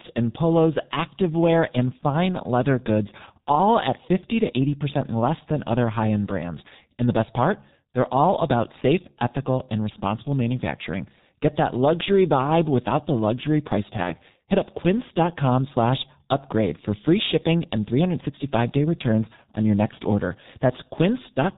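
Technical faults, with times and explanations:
Throughout: G.723.1 codec. The speech is heavily muffled and hoarse, with smeared consonants, which fits a rate near 6 kbit/s. The 30 ms frames update the voice model coarsely. A spectrogram shows almost nothing above 4 kHz and blocky, stepped formant tracks.
14.03–14.14 s: VoIP packet loss concealed by the speech codec, just after "without the luxury price". The decoder repeats its last pitch and filter at falling gain, so the sound is briefly stretched and fades. This fits a single lost 30 ms frame. The waveform shows a shrinking, over-regular stretch.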